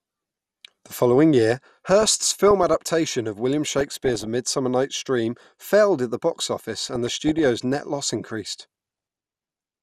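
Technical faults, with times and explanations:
Throughout, MP2 compression: the speech is dull and gurgling, with upper frequencies flickering in and out and a coarse, grainy texture on what remains. This likely comes from MPEG Layer II coding short of bits, consistent with about 80 kbps. It is constant, never bursting.
1.86–2.86 s, 3.79–4.27 s, 6.83–7.46 s and 8.81–9.17 s, DAB burbling: bursts of burbling sit over the speech as single sub-bands get short blips of noise or jump in level for up to a frame. Bit errors under one percent slipped past error correction into samples and scale factors. The effect comes and goes with reception.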